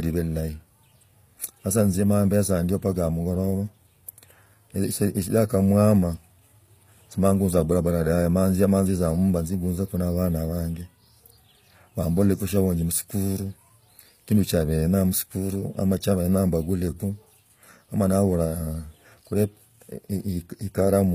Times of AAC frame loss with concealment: none

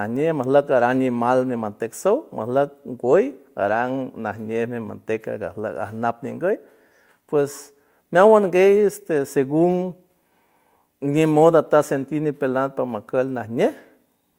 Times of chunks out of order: none

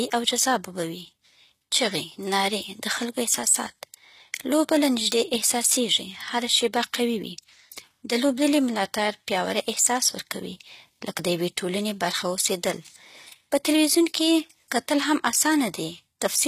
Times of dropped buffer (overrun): 3.38, 5.12, 11.19

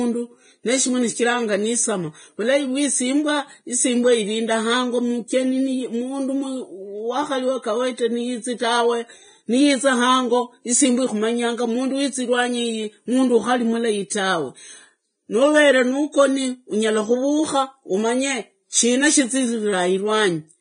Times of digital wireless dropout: none

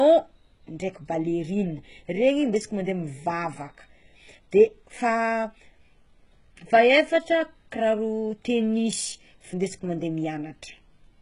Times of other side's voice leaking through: none

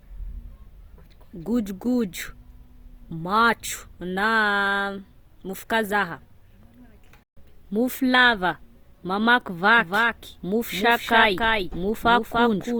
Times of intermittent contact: none

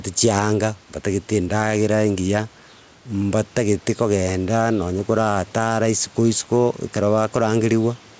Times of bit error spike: none

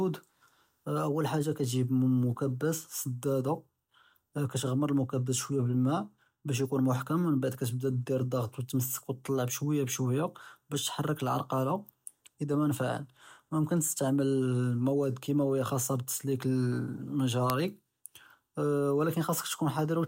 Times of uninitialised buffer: 17.50

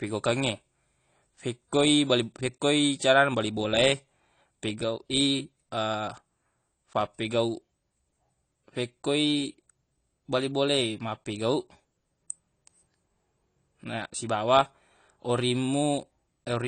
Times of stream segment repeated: none

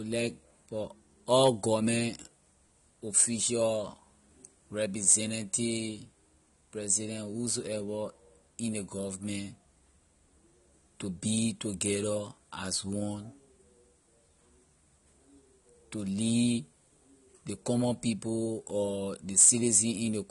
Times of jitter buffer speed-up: none

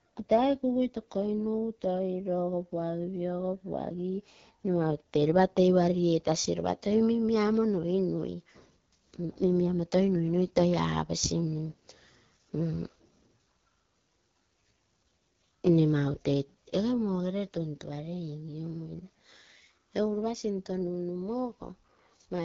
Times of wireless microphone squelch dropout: none

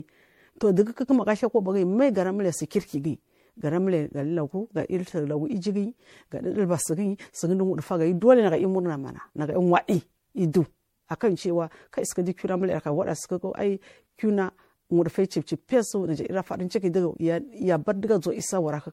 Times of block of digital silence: none

